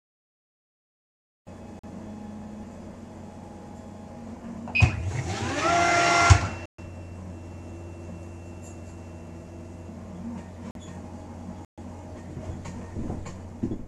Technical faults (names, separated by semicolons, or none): block of digital silence